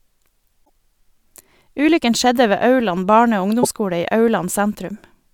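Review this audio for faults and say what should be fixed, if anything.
Damaged data in a compressed stream occurs twice in this speech, from 0.62 to 0.69 s and from 3.59 to 3.65 s. Corrupted bytes in the encoded frames threw the decoder off; it misread those frames and had to hunt for the next valid frame header before playback could resume. Each spot is heard as a short disruption, about 78 ms and 58 ms long, cutting into the speech. To prevent this, deliver the file over a checksummed, error-checked transfer and re-fetch or re-encode from a clean source.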